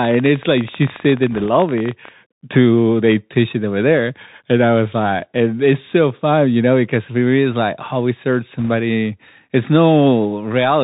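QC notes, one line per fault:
Throughout: Bluetooth CVSD headset codec. The speech is narrowband with nothing above 4 kHz, sibilants turn scratchy, and a granular hiss sits underneath. The sound fits a 64 kbps one-bit delta stream whose adaptive step lags loud high content. On a spectrogram there is a hard ceiling at 4 kHz over a grainy noise floor.
0.03–2.09 s: train of clicks. About 40 sharp, similar ticks arrive at an uneven pace, averaging 18.5 per second, with peaks about 5 dB above the speech. They are likely from nearby interference or a faulty connection or power supply. They show as thin vertical broadband lines on a spectrogram and as narrow spikes in the waveform.
1.31–1.46 s and 8.59–8.69 s: bit errors on a Bluetooth voice link. Short bursts of rushing crackle lie over the speech but never produce loud pops. The flipped delta bits each nudge the waveform by one small step and then decay. 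Their extent fits a few dozen damaged frames at a low error rate, around 1 to 1.5 percent. On a spectrogram the noise is diffuse and smeared, not spiky.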